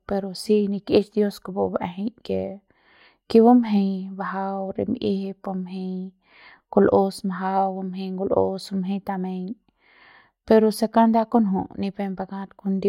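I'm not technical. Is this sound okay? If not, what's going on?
Yes, the speech in this recording has no audible technical faults.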